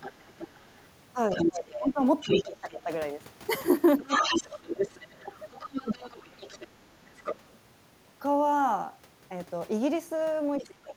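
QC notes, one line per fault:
0.00–2.57, 4.08–7.57 and 10.59–10.72 s: other side's voice leaking through. A second voice sits under the talker, roughly as loud as them at first, a little quieter from 4.08 s, and only a faint scrap near the end. That's most likely far-end audio from the loudspeaker getting back into the mic and not being fully cancelled, which is why it comes across as a separate voice and not as room reverb.
1.45–2.89, 3.98–4.09, 7.37–7.44 and 10.86–10.96 s: speech suppressed in double talk. The talker's level ducks while the other side is also talking. The first dip lasts about a second and goes deep, around 15 dB, and the later ones are short, a tenth of a second or less, at around 10 to 15 dB. The echo canceller likely couldn't separate the near voice from the echo, so it pulled everything down together.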